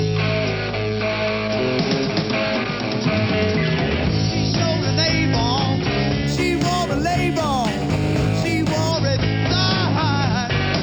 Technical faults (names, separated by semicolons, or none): imaging from linear upsampling